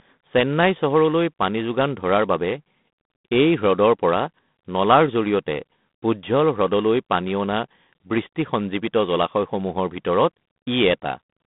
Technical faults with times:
0.00-11.46 G.726 ADPCM

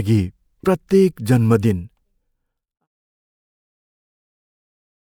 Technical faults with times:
none

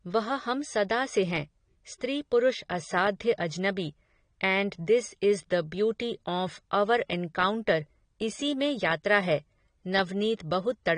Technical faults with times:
0.00-10.97 AAC compression

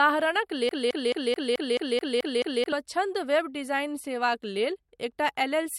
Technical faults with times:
0.69-2.72 broken-record loop

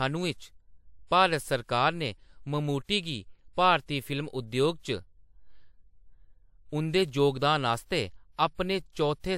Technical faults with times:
0.00-9.38 transcoding between lossy codecs

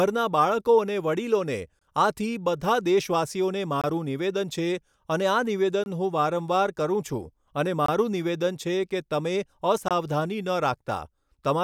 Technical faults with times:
1.79-1.81 gap between chunks
3.81-3.84 gap between chunks
5.84-5.86 gap between chunks
7.86-7.88 gap between chunks
9.88-9.91 gap between chunks

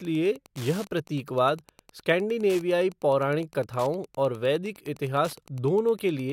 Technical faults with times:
0.00-6.32 Wi-Fi interference

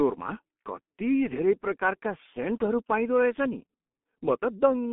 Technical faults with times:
0.00-4.93 G.723.1 codec

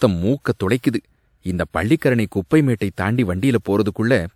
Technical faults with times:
0.78-0.83 pre-echo
1.96-2.02 pre-echo
2.76-2.81 pre-echo

